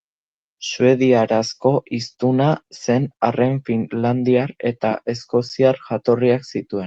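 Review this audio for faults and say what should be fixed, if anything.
Nothing here needs fixing; no faults turn up anywhere in this speech clip.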